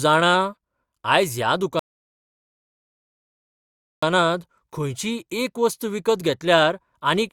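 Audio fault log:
1.79–4.03 s, rebuffering stall: after "आयज ह्या" the speech cuts to silence for 2.23 s, then resumes exactly where it stopped, because the player ran out of downloaded audio and waited. Nothing is lost, only time added. Waveform: flat gap. Spectrogram: empty vertical band.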